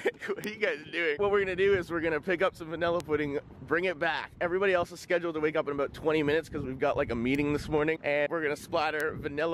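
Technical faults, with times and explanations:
0.44 s, 3.00 s, 7.35 s and 9.00 s, bit error spike: a single flipped bit throws a sample value off by a power of two (three samples in a row at 3.00 s) and it snaps straight back. You get a sharp broadband tick unrelated to the sound, peaking at about -11 dBFS at 0.44 s and 9.00 s and about -17 dBFS at the other two.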